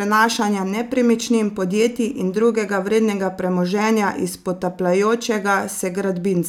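Listening to the recording, nothing stood out as a technical problem at any point.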